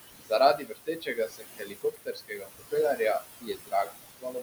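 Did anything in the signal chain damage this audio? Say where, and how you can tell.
Yes. Noise suppressor artifacts run throughout, from call processing: the room noise, about 10 dB under the speech, is pushed down about 18 dB frame by frame.

Speech cut by the noise suppressor occurs at 0.17–0.31 s, 0.57–2.73 s and 3.2 s to the end. The suppressor mistakes quiet speech for noise, dropping it by about 20–22 dB and swallowing over two seconds in all.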